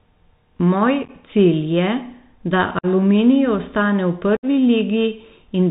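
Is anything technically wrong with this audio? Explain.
Yes. Throughout, the speech is narrowband and scratchy, with s sounds roughened, loud bright sounds distorting, and a grainy hiss underneath. This is the Bluetooth CVSD headset codec, whose sound fits a 64 kbps one-bit up/down coder with an adaptive step that can't follow fast changes, and which passes nothing above 4 kHz.

There is also unconcealed Bluetooth headset packet loss. From 1.04 to 1.11 s the speech crackles and chops, with about 30 ms missing in fragments spread over roughly 50 ms, the longest gap 11.2 ms. From 2.79 to 2.86 s a 48.8 ms hole cuts in with abrupt edges. Just after "ostane v", from 4.37 to 4.45 s, a 63.8 ms hole does the same. The speech comes back briefly quieter each time. Lost headset packets were replaced by silence or an idle pattern rather than concealed, which fits roughly 7, 15 and 15 short packets lost in the three events.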